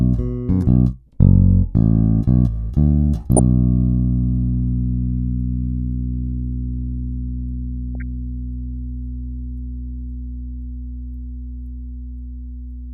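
The audio carries three short bursts of DAB burbling, at 3.37 to 3.39 s, 5.93 to 6.00 s and 7.95 to 8.02 s, each a brief patch of noise blips laid over the sound. Weak reception lets bit errors slip past error correction into the MP2 data, so corrupted samples put short blips of noise in single sub-bands and corrupted scale factors make individual sub-bands leap in level for up to a frame. The burst at 3.37 s has the heaviest error rate, about 0.3%. Unlike a dropout or packet-loss gap, the burbling does not cut the sound to silence, and the bubbling comes and goes with the bursts rather than colouring the whole clip the way steady low-bitrate swirl would.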